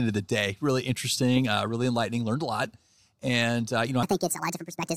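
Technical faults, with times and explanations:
4.03 s to end: section at the wrong speed. The speech plays 1.59 times too fast, pitch rising about seven semitones, likely from being resampled against the wrong clock.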